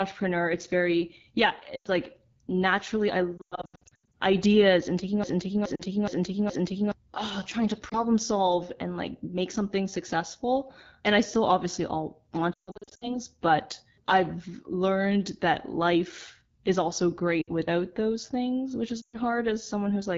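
The whole clip is speech running through the AMR wideband (HD Voice) codec at a rate that sounds like the 8.85 kbit/s mode, one of the lowest. At that rate the damage is plainly audible. The model rebuilds the voice from pitch pulses and a vocal tract filter, and with so few bits it comes out rough and raspy, with a fizzy, noise-filled top end above about 6.4 kHz.

Lost AMR speech frames show up first at 1.75 to 1.87 s as a short drop of about 100 ms. When frames fail, the decoder reuses the last good pitch and filter settings at falling gain, so you get a smeared, fading warble instead of a hard gap. At 3.37 to 4.14 s the losses are scattered over about 760 ms, and that stretch keeps stuttering and going thin.

From 5.24 to 6.92 s there's a broken-record loop: a piece of about 420 ms repeats back to back four times. Whatever should have played there is gone. It's likely the stream or player stalled and kept resending its last buffer. 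Inside the loop, at 5.76 to 5.82 s, there's another brief frame-loss dip.

More lost frames follow:
at 7.89 to 7.99 s, a quick warble between "oh trying to" and "solve and like make";
at 12.54 to 13.18 s, a ragged, fading patch between "still obviously all want" and "but I've learned that", with the voice coming back weak;
at 17.42 to 17.50 s, between "that life is also" and "without those things which";
and at 19.02 to 19.17 s, a short fade-out.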